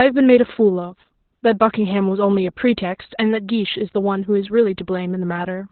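Opus voice compression runs through the whole speech clip. The codec is in its SILK linear-prediction mode at narrowband. Nothing is left above about 4.4 kHz, so the voice sounds boxed in and telephone-like. The damage is heavy. The excitation is coded so coarsely that the voice turns hoarse and slightly robotic. That points to a very low rate, around 8 kbps. The codec works in 20 ms frames.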